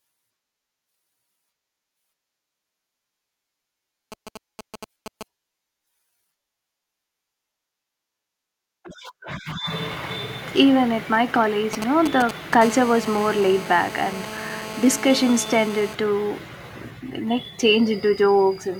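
A 2G phone close to the recording chain starts signalling to its network, and the audio circuitry rectifies the short radio bursts. From 4.12 to 5.23 s, these GSM signalling bursts come through as a galloping dit-dit-dit of brief buzzes at a rate of 217 Hz, sitting fairly low under the speech. They return, much louder and almost level with the speech, from 11.73 to 12.55 s, right after "at my".

At 12.62 s the phone moves into an actual call and transmits continuously in its 217-per-second burst pattern, so the rectified interference becomes a steady GSM phone buzz. This hard, raspy 217 Hz tone, rich in harmonics and about 13 dB below the speech, runs without a break until 15.95 s, entirely independent of what is being said.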